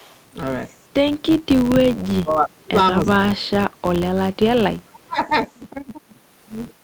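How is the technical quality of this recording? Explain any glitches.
The recording has three distinct technical faults: a steady buzz running through the whole clip, brief echo at two points, and repeated dropouts in the speech between about 2 and 5 seconds.

Filter restarted on every block: from start to end there is a regular buzz at 93.8 Hz that rises and falls with the speech level. A filter in the chain appears to reset its internal state at every processing block, so each block starts from silence and opens with a tiny transient. Those ticks repeat at the block rate, which fits a 512-sample buffer, and fuse into a low, level-dependent buzz.

Echo leak: at 0.0–0.25 s, and again briefly at 5.41–5.45 s, a faint delayed copy of the speech trails it by 316 ms, at about 30 dB and about 35 dB below the direct signal respectively. The likely cause is a far end playing the call over a loudspeaker, with its echo canceller failing to remove all of what its microphone picked up. 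The residue is sent back, so it arrives as quiet scraps.

Speech suppressed in double talk: the speech dips sharply in four stretches, at 2.04–2.77 s, 3.03–3.81 s, 3.97–4.44 s and 4.63–5.19 s. The deepest drops are roughly 30 to 40 dB, enough to make parts of the speech nearly vanish. This is likely an echo canceller faced with both sides talking at once: unable to tell the local talker from loudspeaker echo, it turned everything down.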